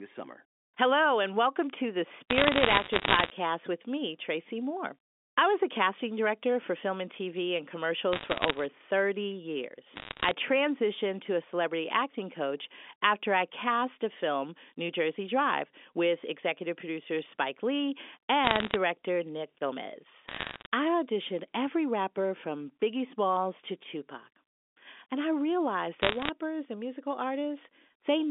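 Telephone speech, band-limited to about 250 Hz–3.5 kHz, carries bursts of crackle from bit errors on a digital phone line at 2.3–3.3, 8.13–8.65, 9.96–10.31, 18.44–18.76, 20.28–20.66 and 26.02–26.3 s. Flipped bits, near one percent, corrupt single samples into sharp ticks.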